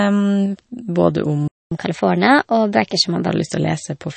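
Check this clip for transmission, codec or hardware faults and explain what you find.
Three things stand out: compression damage across the whole clip, a dropout early on, and a sped-up stretch right after it.

The whole clip sounds like MP3 compression, most likely. Nothing comes through above 8.4 kHz, so the speech is dull and lacks air. The encoder ran short of bits, chopped the top end at a fixed point, and let weak frequency lines flicker on and off between frames. That gives a watery, swirly texture with chirpy sibilants, and it fits a low bitrate around 32 kbps.

At 1.48 s the sound just stops until 1.72 s, a gap of about 235 ms. That's a playback stall. The player likely either ran dry of data or had its thread held up, so the output went silent mid-flow. You simply get a hole in the middle of the speech.

From 1.72 s to 3.28 s there's catch-up at higher speed. The player works off the backlog from the stall by resampling at 1.15 times normal rate. 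Because resampling shifts speed and pitch together, the speech comes out quicker and about two semitones higher, with a slightly chipmunky feel. Once the lost time is recovered at 3.28 s, it drops back to normal pace and pitch.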